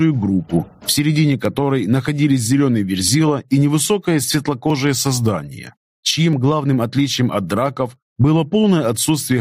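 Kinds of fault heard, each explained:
Gain pumping: The level keeps breathing in and out, with the swing reaching roughly 20 dB. Loud and quiet passages end up squeezed close together, so the whole clip sounds flattened. The likely cause is input gain set far too high, with a fast limiter or compressor clamping down on each peak and letting go between them.
Clock drift buffer slips: A click recurs at a steady pace, about every 1.62 s, from around 1.45 s to 7.96 s. That gives about five slips. Each is a tiny jump where a few dozen samples, roughly 30, go missing or repeat. The likely cause is two devices running on separate clocks that disagree by something like 400 ppm. The buffer between them slowly drifts until it has to skip or double a block.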